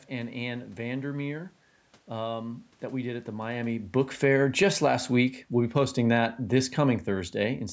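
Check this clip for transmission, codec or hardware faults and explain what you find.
One fault stands out: automatic gain falling. From 3.54 s, just after "we did at the", the level sinks steadily until 7.66 s, ending about 6 dB lower, and the room noise drops along with the voice. That shared drop is the giveaway. The call's automatic gain control judged the input too loud or its background noise too strong and pulled its gain down gradually, so everything it passes shrinks together. The talker's shift in distance around the same moment changes only the voice, not the background.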